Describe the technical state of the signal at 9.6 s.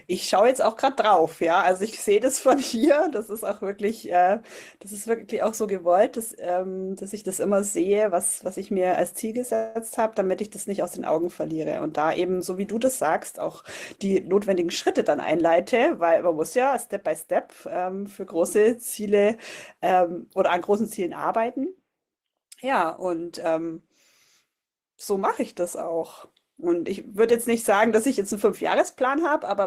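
A call audio freeze runs from 9.55 to 9.77 s: the jitter buffer likely ran empty, so the last sound is stretched into a fading buzz or hiss. Speech then resumes where it stopped, about 200 ms late.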